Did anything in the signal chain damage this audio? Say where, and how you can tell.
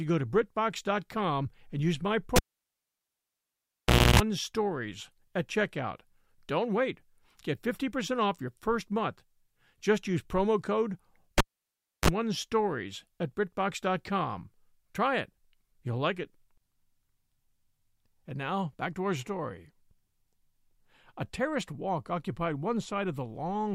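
Yes, in the analogue wiring: a cable pulled and plugged in after "and use my" at 2.36 s (1.79 s gap, 0.29 s of 60 Hz buzz) and after "use promo code" at 11.38 s (0.66 s gap, 32 ms of 50 Hz buzz). Each gap has a pop at both ends, and the buzz comes from the plug tip touching before the ground connects.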